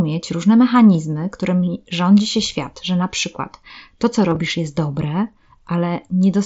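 Between 4.30 and 4.36 s, concealed Bluetooth headset packet loss drops about 30 ms of audio, scattered across 60 ms in runs of 15 ms at most. The receiver repeats recent waveform to fill each gap, giving a brief buzzy flutter over the mSBC-coded speech.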